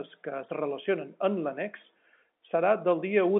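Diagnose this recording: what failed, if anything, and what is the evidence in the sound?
Nothing here has failed: the speech comes over an ordinary G.711 telephone line, so it sits in the usual phone band of about 150 Hz to 3.4 kHz with nothing above about 3.7 kHz, and that's just how a telephone channel sounds rather than a sign of trouble.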